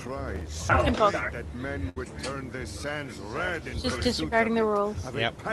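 From 0.33 to 0.63 s, a gritty processor overload crackle tears across the sound. The processor repeatedly failed to finish its audio buffers in time, dozens of misses in a row, and the very short buffer length, well under a millisecond, means each skipped buffer leaves only a tiny hard-edged hole. Unlike a single dropout or click, these many closely packed gaps merge into continuous grit lasting about 0.3 s, then stop abruptly once the load eases.

At 1.89 s, a burst of packet loss cuts into the sound, through the call path's Opus coding with its roughly 12 kHz bandwidth limit. The receiver filled the missing stretch by extending the last sound for about 67 ms, fading it as it went, so the result is a brief smeared tail rather than crackle or silence. About 60 ms of the original audio never arrives, and the sound resumes at 1.98 s slightly further along, with a small jump.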